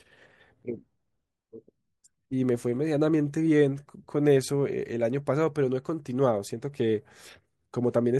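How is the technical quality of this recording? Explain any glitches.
Nothing here needs explaining: I hear no glitches anywhere in the recording.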